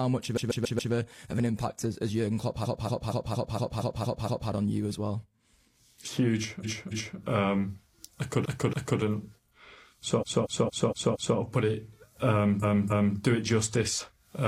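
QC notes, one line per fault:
0.33 to 13.15 s, repeated frames: six stutters, at 0.33 to 0.89, 2.60 to 4.46, 6.60 to 7.16, 8.41 to 8.97, 10.17 to 11.34 and 12.59 to 13.15 s. In each, a short block of compressed audio of about 139, 232 or 279 ms is decoded again two to eight extra times, so the same slice loops. Together the loops stretch the clip by about 5.2 s.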